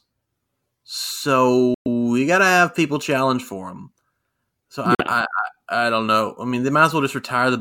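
At 1.74 to 1.87 s, just before "you got to have", and again at 4.95 to 5.01 s, the speech cuts out to silence, likely a Bluetooth dropout from late packets. Unlike a stall, nothing is delayed: the speech resumes further on, with that stretch simply missing.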